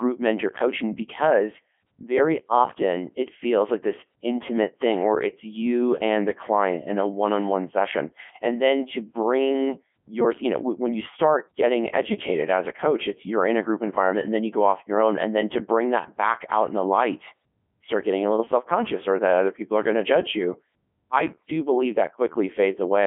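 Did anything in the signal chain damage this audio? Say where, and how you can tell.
Yes. A Codec 2 vocoder at the codec stage runs throughout the clip. The speech sounds robotic and buzzy, and heavily damaged. It is squeezed into a 200 Hz to 3.4 kHz line band, with nothing above 3.6 kHz, which fits Codec 2's 3.2 kbit/s mode. The encoder keeps only pitch, voicing, energy and a coarse spectral envelope. The decoder then rebuilds the voice from sine waves, so the original waveform and its natural texture never return.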